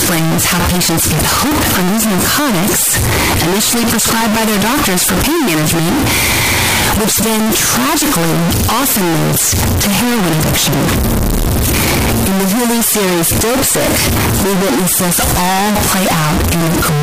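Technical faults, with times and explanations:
Throughout, float read as integer: speech slams into a near-square waveform at an almost fixed, high level, noise as loud as speech, spectrogram smeared broadband; likely 32-bit float samples read as 32-bit integers.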